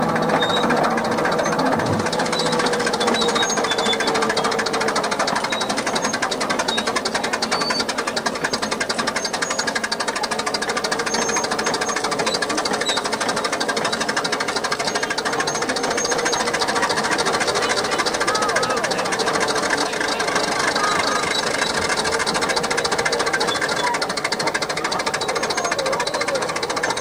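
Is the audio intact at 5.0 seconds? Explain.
Yes, the audio is intact at 5.0 seconds, with no dropout, click, distortion or other fault to be heard at that moment.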